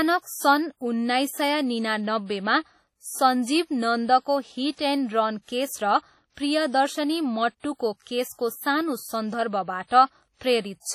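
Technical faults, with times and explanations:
Throughout, WMA compression: the speech has a ringing, washy quality, with a hiss that swells and fades with the voice, and nothing is heard above 16.8 kHz. The damage is heavy, which fits a bitrate of around 32 kbps, and the likely cause is a simple Windows Media Audio transform encoder. Because its long blocks spread quantisation noise over tens of milliseconds and quiet spectral detail is zeroed, the sound smears rather than crackling.
8.04 to 8.07 s, pre-echo: for about 24 ms, a short hiss leads into a sharp onset, and the attack itself sounds softened and smeared. The transform block containing this onset was quantised as a whole, so noise scaled for the loud attack also filled the quiet moment just before it. The noise arrives ahead of the sound, not after it, which separates it from reverberant smearing or a click.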